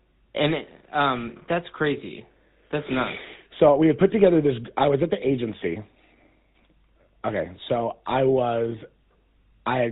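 The speech has been carried through the GSM full-rate codec for the whole clip, a scheme that rebuilds the voice from a vocal-tract model driven by a regularly spaced pulse train, keeping only a third of the excitation samples. The degradation is plainly audible, which fits the 13 kbps of that codec. Nothing above 4 kHz survives, so the sound is dull and band-limited, and the decimated pulse excitation adds a buzzy, gravelly roughness throughout.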